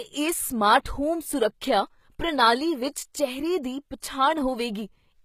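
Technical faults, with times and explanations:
Throughout, HE-AAC compression: the speech carries plainly audible coding damage, and nothing sits above about 14.9 kHz. The cause is likely HE-AAC v2 at a low rate, which fits roughly 20 kbps. The codec spends its bits only on the lower spectrum and fills the treble by copying lower bands upward under a coarse envelope, so the top end sounds synthetic. Its harmonics fail to match those below the crossover, leaving sibilants gritty and metallic.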